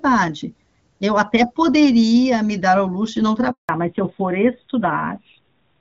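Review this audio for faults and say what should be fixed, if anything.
There's a handover gap from 3.51 to 3.69 s, about 180 ms where the speech just drops out. The call got passed from one network to another, and no speech frames made it across during the switch. The sound fades within a few tens of milliseconds and stays silent until the new link picks up, so whatever was said in that window is gone. To prevent it, tighten the handover so frames keep flowing, or use packet-loss concealment to bridge the gap.

Right after that, from 3.69 s to the end, there's a fallback to narrowband. Everything above 4 kHz disappears, and the speech turns duller and rougher than the light HD Voice coding before the switch, which fits AMR-WB at around 12.65 kbit/s. The change points to the call renegotiating down to AMR-NB, likely at 7.4 kbit/s, after the new link came up. The fix is to make sure the target network supports and keeps AMR-WB across the handover.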